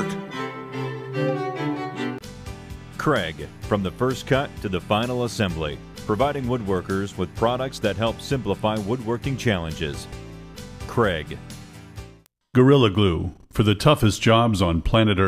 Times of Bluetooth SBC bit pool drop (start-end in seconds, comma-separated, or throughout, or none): none